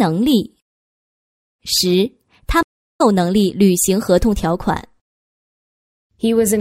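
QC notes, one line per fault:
2.63–3.01 s, stream reconnect: the connection dropped and the sound cuts to about 0.32 s of silence, then a fresh decoder starts mid-stream, so it picks back up roughly a fifth of a second further on, with that stretch simply skipped.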